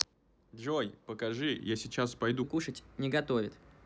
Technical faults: section at the wrong speed

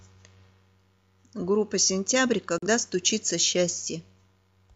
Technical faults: digital broadcast dropout

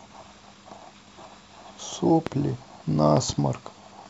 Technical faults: loud pop

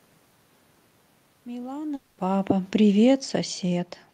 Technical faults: automatic gain falling; long network dropout

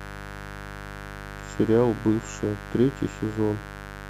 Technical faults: mains buzz

